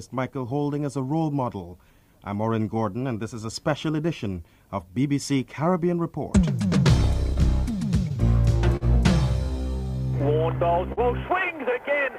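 The audio carries clock drift between sender and receiver for its whole length. The sender's clock runs roughly 3 percent slow, so the receiver's jitter buffer keeps draining, and the receiver has to keep stretching and holding sound to stay in step. Repeated timing corrections run from 0.39 to 8.18 s. The receiver slows playback to 98 percent speed, adding about a fifth of a second in total. The edits all lengthen the audio, but they land at uneven spacing. Scattered short gaps fall between 7.04 and 8.13 s. A few packets went missing or arrived late there. Each small hole was patched by carrying the previous sound forward, and the longest was only about 15 milliseconds. Nothing is lost, but brief ticks or smears can be heard. A short stall from a late packet hits at 8.77 to 8.84 s. The jitter buffer ran dry, so the last sound was held for 43 ms until the packet turned up. Playback then resumed where it left off, leaving a slightly stretched moment with a slight buzz or dip. 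The same kind of stall repeats at 10.93 to 11.00 s, with a 45 ms hold. Here too the sound lingers briefly with a slight buzz or dip rather than dropping out. Both stalls fit the slow sender clock starving the buffer.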